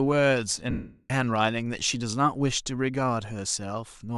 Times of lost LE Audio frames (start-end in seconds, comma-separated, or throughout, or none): 0.71-1.10